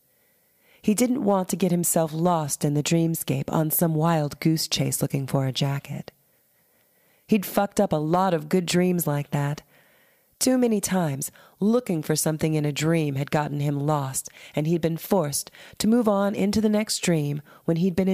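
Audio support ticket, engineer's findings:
No faults detected in this recording.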